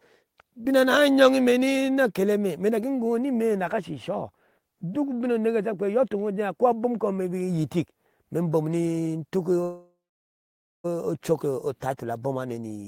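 A speech recording in which, right after "ni tuk", the audio freezes from 9.63 s to 10.86 s: the last sound is drawn out briefly into a fading buzz or hiss, then about 0.89 s of silence, before the talker resumes exactly where they left off with nothing lost. This is a call audio freeze, likely caused by packets stalling in transit until the jitter buffer emptied, so roughly 1.2 s of filler was inserted and everything after arrives that much later.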